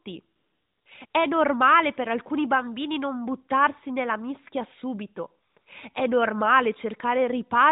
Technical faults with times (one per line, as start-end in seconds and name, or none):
0.36-1.14 AMR comfort noise
5.50-5.66 AMR comfort noise